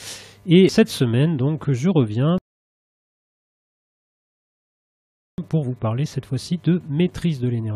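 At 2.38 s the player runs out of downloaded audio and halts until more data arrives, a rebuffering stall. The sound drops to silence until 5.38 s, then picks up exactly where it stopped, losing nothing but adding 3.0 s.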